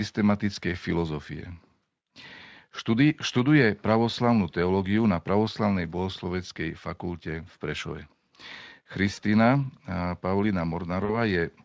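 At 9.13 to 9.19 s and again at 11.05 to 11.17 s there is VoIP packet loss concealed by the speech codec. About 40 ms of audio went missing each time. The decoder stretched the last sound into a fading buzzy tone or coloured noise, and the speech stays weak briefly afterwards.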